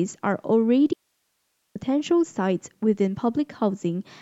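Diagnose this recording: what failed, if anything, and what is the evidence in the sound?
An audio dropout to a faint residue runs from 0.93 s to 1.75 s: the speech cuts off abruptly mid-flow and returns just as suddenly about 0.82 s later, with only hiss some 50 dB below the signal filling the gap. The stage is likely analogue wiring, such as a momentary break in a connection while the downstream input stayed live. On the waveform the envelope collapses to a thin noise floor with hard edges; the spectrogram shows a broadband grey band with no harmonic structure.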